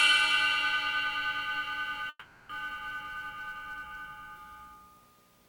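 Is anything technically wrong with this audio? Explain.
Yes. From 2.09 to 2.51 s there is a long network dropout, likely a stalled packet stream: the receiver stretches the last sound into a fading buzz or hiss for about 400 ms, then goes silent for about 40 ms. The audio resumes with roughly 400 ms missing.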